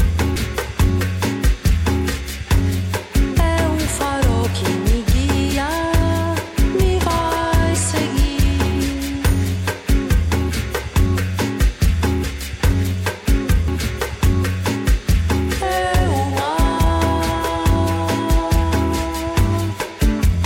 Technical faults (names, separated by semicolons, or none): dropped buffer (overrun)